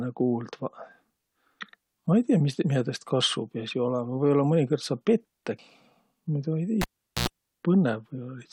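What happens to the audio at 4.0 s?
Nothing goes wrong at 4.0 s; the speech plays through that moment intact, with no dropout, click, glitch or other audible fault.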